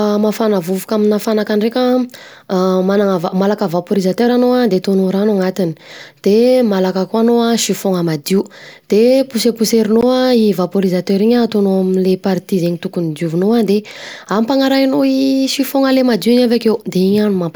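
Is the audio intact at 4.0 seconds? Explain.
Yes, at 4.0 seconds the speech plays through intact, with no dropout, click, distortion or other fault at that point.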